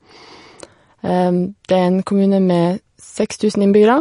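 Throughout the speech there is audible MP3 compression damage, likely from a low bitrate around 40 kbps: the treble is cut sharply at 10.6 kHz, and weak frequency lines drop in and out between frames, giving a watery, swirly texture. A spectrogram shows a flat ceiling and speckled, flickering holes below it.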